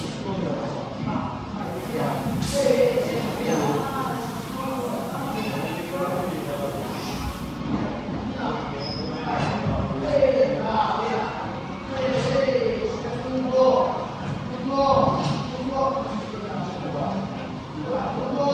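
From 1.59 s to 7.63 s you get digital radio blending to analogue: the receiver lost its digital lock and cross-faded over about 264 ms to the FM broadcast, bringing in hiss roughly 25 dB down and a level shift of about 1 dB, before fading back to digital.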